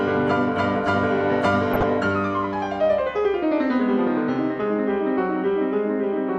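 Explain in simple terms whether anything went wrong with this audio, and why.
DAB burbling hits the music at 1.73–1.83 s and 4.57–4.68 s: weak-reception bit errors corrupt the broadcast data, making parts of the sound briefly break up into short blips of noise.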